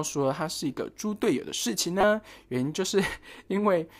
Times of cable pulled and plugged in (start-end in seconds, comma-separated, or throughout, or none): none